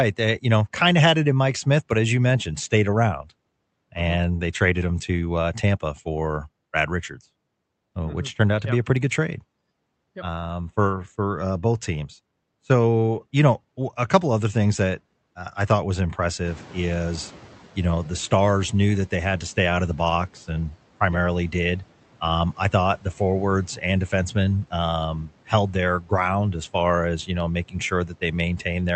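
In this speech clip, from 16.44 to 18.2 s, between "uh I thought was" and "knew that they had", the background noise comes through louder before sinking by about 8 dB. This is a noise suppressor catching up: the room noise jumped by about 17 dB around 16.5 s, and the suppressor's noise estimate took 1.76 s to adapt. The call codec path limits the bandwidth to about 8 kHz.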